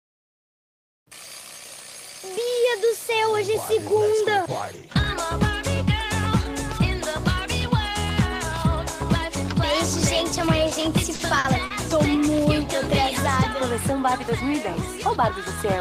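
Around 11.15, 11.39 and 11.66 s you get three short stalls from a late packet. Each time the jitter buffer ran dry, so the receiver held the last sound for about 40, 50 and 40 ms, then carried on without skipping anything. You hear a brief smeared hold with a slight buzz or dip.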